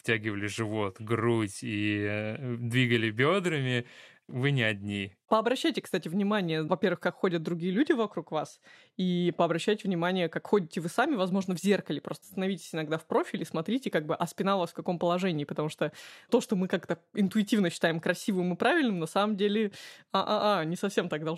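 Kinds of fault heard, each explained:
No technical faults are audible anywhere in the recording.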